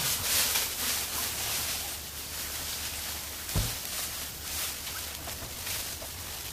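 A time-stretched section runs from 4.71 s to 6.53 s, where the audio abruptly plays about 1.76 times faster while its pitch stays put. It sounds rushed, likely from software dropping short slices to shorten the passage without shifting pitch.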